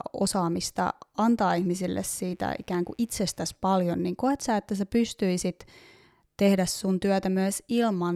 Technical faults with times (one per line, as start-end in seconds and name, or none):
2.08-3.58 mains buzz